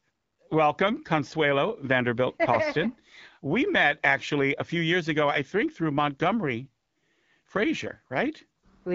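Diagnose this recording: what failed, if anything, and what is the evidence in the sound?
Nothing has failed here.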